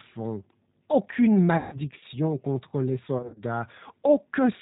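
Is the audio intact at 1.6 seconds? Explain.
No. From 1.57 to 1.77 s the sound stretches into a buzzy tone or a smeared coloured noise that fades, and it stays weak and distorted for a short while after 1.77 s. This is VoIP packet loss concealed by the speech codec, which points to about 150 ms of missing packets. With no new data, the decoder kept reusing its last pitch and vocal tract filter and turned the gain down frame by frame. Each frame builds on the one before, so recovery lags after the packets return.

Underneath this, the speech sounds rough, slightly synthetic and dull, with nothing above 4 kHz. That is the G.729 codec, and the damage is plainly audible, in a way that fits an 8 kbit/s G.729A stream. It rebuilds speech from a vocal tract filter, a pitch predictor and a few pulses per 10 ms frame rather than sending the waveform itself.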